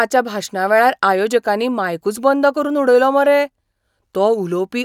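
Nothing in this recording stands out as a technical fault, so there's no problem to point to at any moment.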